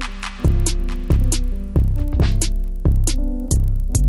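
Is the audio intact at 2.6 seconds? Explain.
No. At 2.6 seconds the audio carries a resampler restarted on every block fault, which runs through the whole clip. The signal was converted in separate 40 ms blocks, which fits an upsampling from 24 kHz to 48 kHz. At each block edge the converter lacked the real neighbouring samples, so it left a small error there. The result is a regular tick at 25 Hz, a buzz heard whenever sound is present.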